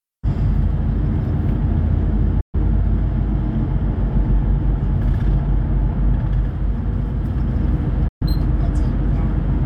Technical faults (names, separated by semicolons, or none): digital broadcast dropout